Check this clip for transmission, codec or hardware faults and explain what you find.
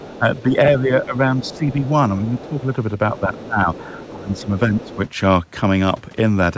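Two echo-related faults recur through this speech clip, both pointing to an echo canceller struggling with double talk. The call path's band limit, with nothing above 8 kHz as expected from a 64 kbps G.722 link, is not itself a fault.

Other side's voice leaking through occurs at 0.0–0.43 s, 1.4–1.9 s, 2.27–2.63 s, 3.16–4.42 s and 4.8–4.97 s. A second, fainter voice sits about 20 dB under the talker, likely loudspeaker echo the canceller left behind. On a spectrogram it appears as a weak, separate harmonic pattern beneath the main speech.

Speech suppressed in double talk shows up at 0.0–1.85 s, 2.19–2.58 s and 3.13–4.98 s. The talker's level dips by about 10 dB, and by about 15 dB in the last stretch, likely because the canceller turned everything down while both sides spoke. The waveform shows sagging envelopes.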